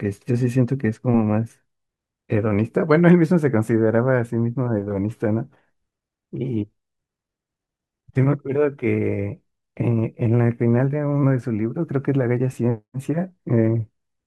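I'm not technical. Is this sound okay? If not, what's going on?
Yes, this sound is okay, and nothing is going wrong with it.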